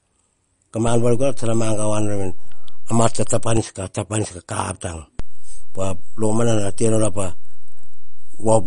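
Speech in which the treble stops sharply at 10.6 kHz and the sound turns plainly watery, with swirling, metallic chirps on s sounds. These are the marks of MP3 compression, likely at a low bitrate near 40 kbps. On a spectrogram, everything above 10.6 kHz is empty, and patches of weak detail blink on and off frame by frame. A DC step at 0.87 s shifts the waveform's zero line, which drops back at 3.57 s. A second step at 5.20 s holds to the end. Each shift is heard as a low thump while the speech runs on, and the waveform sits off-centre between those times.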